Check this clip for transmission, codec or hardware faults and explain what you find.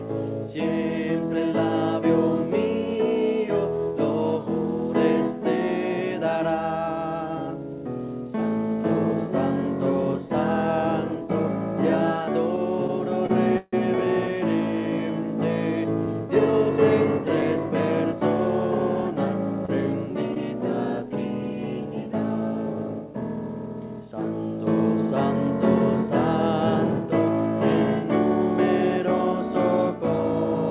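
Three kinds of fault show up, all on the receiving side of a call path that carries G.711 mu-law at 64 kbps, with nothing above 4 kHz.

From 12.56 to 13.75 s there are repeated stalls (stutter). Packets came in late or slower than playback, so the jitter buffer ran dry four times. Each time the receiver stretched the last sound to cover the wait, about 205 ms in total, the longest single gap 153 ms, roughly 17% of that stretch. Nothing is actually lost. The audio drags and hiccups rather than skipping, which separates it from packet loss.

From 15.84 to 18.21 s comes a jitter buffer speed-up. Too much audio had piled up in the buffer, so the receiver trimmed short pitch-period slices again and again to bring the delay down, removing about a tenth of a second overall. Playback runs at 104% speed with the pitch unchanged. It is the reverse of the stalls, which slow and stretch the sound instead.

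Short concealed packet loss occurs at 19.65–19.70 s and again at 20.34–20.38 s. Each time, 20 ms of audio, which fits one lost packet, never arrived. The receiver bridged the hole by continuing the preceding sound for 27 ms and 14 ms respectively before blending back in. Unlike the stalls, real content is gone here. What you hear is a brief smear or wobble rather than a drawn-out stutter.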